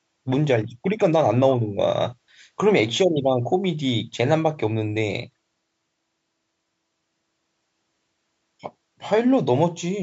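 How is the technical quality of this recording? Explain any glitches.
No glitches turn up anywhere in this speech recording; it sounds like it went through ordinary call microphone processing, which trims the deepest bass and leaves nothing above about 8 kHz, and that's just how such a path behaves rather than a fault.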